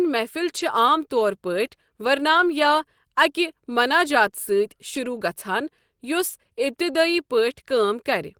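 Lost packets rebuilt from error correction occur at 0.57–0.59 s, 2.29–2.43 s, 4.95 s and 6.29–6.31 s. A lower-quality backup copy carried in the following packet fills each gap, so nothing drops out, but those stretches sound rougher and noisier, including the 80 ms patch at 2.29 s.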